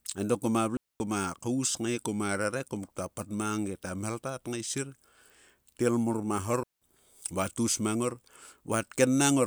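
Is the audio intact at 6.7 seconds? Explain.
No. A digital wireless dropout runs from 6.63 to 6.82 s: the receiver lost too much of the link's data and muted for about 183 ms, leaving a clean hole of near silence with no noise burst, ending just before "va taus mang ngor".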